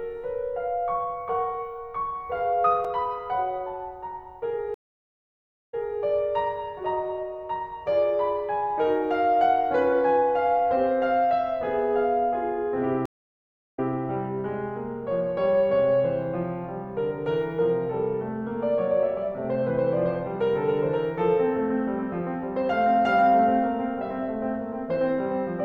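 At 2.85 s the music drops out for about 3.6 ms, a block of digital silence where samples were replaced by zeros, most likely because the output buffer was not filled in time. The hard cut to zero and back is heard as a tick or dip.

At 4.74 s a stream reconnect begins. The connection fails, the audio goes silent for 945 ms, and a fresh decoder picks up mid-stream. Playback resumes about 287 ms earlier than where it stopped, so a short stretch of music repeats, with the first frame or two muted or fading in before the level settles by 5.98 s. A second reconnect at 13.06 s follows the same pattern: 671 ms of silence, then a restart about 183 ms back, with a brief fade-in as the audio returns by 13.91 s.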